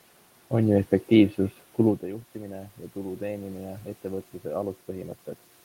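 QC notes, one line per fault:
1.82 to 4.33 s, automatic gain rising: after "ju efektiivsus" the input falls about 17 dB. Gain slowly climbs about 4 dB, swelling voice and room noise together.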